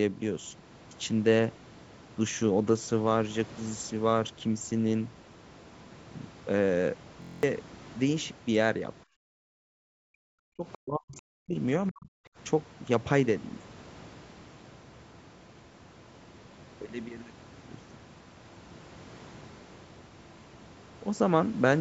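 From 7.22 to 7.43 s a system hang loop repeats one 23.2 ms slice nine times, which fits a 1024-sample buffer. It buzzes at 43.1 Hz and shows as identical repeating waveform blocks.

Speech suppressed in double talk, likely from the echo canceller ducking both talkers, hits 9.15–9.26 s, 9.53–11.57 s and 11.89–12.14 s. Level falls by up to about 40 dB, leaving dark gaps in the spectrogram.

Inside that stretch, at 10.72 s, the other side's voice leaking through appears as a brief faint scrap about 25 dB below the speech. It is likely residual loudspeaker echo and shows as a weak smear.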